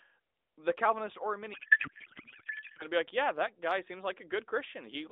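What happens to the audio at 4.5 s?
Nothing goes wrong at 4.5 s: the speech carries on intact through that moment, with only the narrowband mobile-line sound of the AMR-NB codec that runs throughout.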